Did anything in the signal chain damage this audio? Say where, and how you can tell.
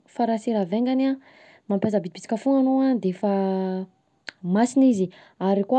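No, nothing damaged this audio.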